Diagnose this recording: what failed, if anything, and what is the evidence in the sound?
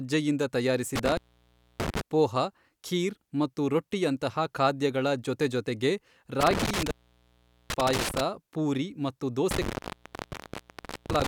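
A loose plug or cable in the analogue wiring is making intermittent contact. The speech cuts out with crackle at each edge during 0.96–2.01 s, 6.41–8.20 s and 9.51–11.27 s. The line stays open for 0.63, 0.79 and 1.39 s, leaving faint hiss.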